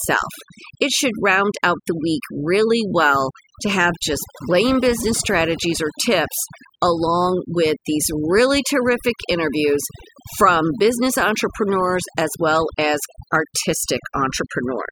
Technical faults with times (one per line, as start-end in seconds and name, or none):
0.00-14.91 overdone noise removal